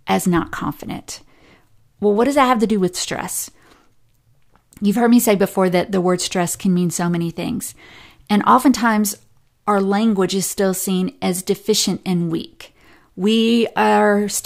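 Speech recording, and nothing technically wrong can be heard anywhere in it.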